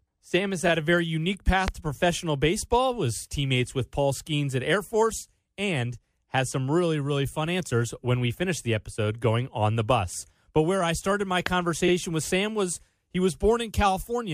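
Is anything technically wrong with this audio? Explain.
Yes. There are two loud pops, at 1.68 s and 11.46 s. Each is a single sharp burst about 20 dB above the sound, which continues underneath. A likely cause is a brief electrical voltage spike.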